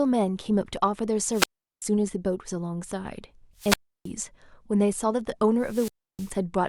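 A speech recording with three wireless microphone squelch dropouts. Each one starts as a brief swell of hiss. Then the sound cuts to near silence and comes back. They fall at 1.31 to 1.82 s, 3.57 to 4.10 s and 5.59 to 6.36 s. The silent holes last about 0.39 s, 0.32 s and 0.31 s. The radio link from the microphone faded each time. The receiver's squelch then muted its output until the signal recovered.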